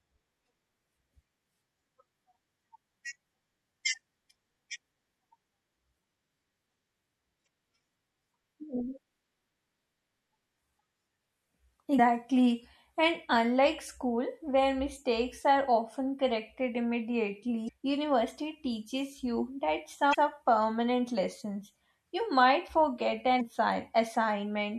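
From the start, the speech has a watery, swirly quality and smeared consonants, likely from MP3 compression at a low bitrate, which fits roughly 64 kbps. On a spectrogram the treble stops at a flat ceiling, with sparse high-frequency patches flickering on and off.

Damaged data in a compressed stream then breaks through five times: 7.43–7.47 s, 11.95–12.00 s, 17.65–17.69 s, 20.10–20.15 s and 23.37–23.41 s. Each is a brief glitch lasting about 36–46 ms, where the decoder misread corrupted frames and lost sync. It shows as a narrow vertical break, with a visible discontinuity in the waveform.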